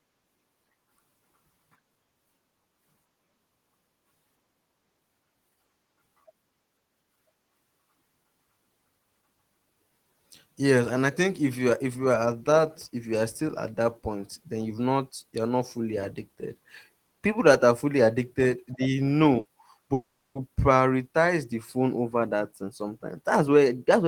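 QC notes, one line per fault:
19.39–19.48 s, burst of packet loss: Right after "are fully addicted they", a run of about 60 ms of packets failed to arrive in time. The receiver extended the last sound for about 60 ms, fading it, and the speech resumes with a short piece missing.
19.93–20.38 s, long network dropout: The speech stops and is replaced by a decaying continuation of the last sound lasting about 420 ms, the last 80 ms or so of it silence, before speech returns with that stretch gone. The likely cause is a stall in incoming network audio.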